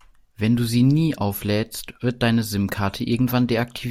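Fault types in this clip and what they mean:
Nothing stands out here; the speech comes across without any fault worth flagging.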